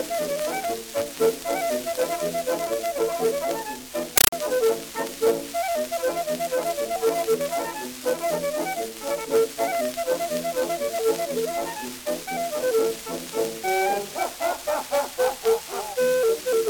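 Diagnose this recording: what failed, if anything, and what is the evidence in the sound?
The playback side failed: a compressed stream played as audio, caught at the digital link. From 4.18 to 4.33 s the sound is replaced by very loud, chattering static. It's made of 8 ms noise bursts repeating at 31.25 Hz, each followed by silence, which points to a Dolby Digital stream, consistent with 384 kbps, going out over S/PDIF or HDMI without decoding. The receiver treated each data frame as ordinary samples.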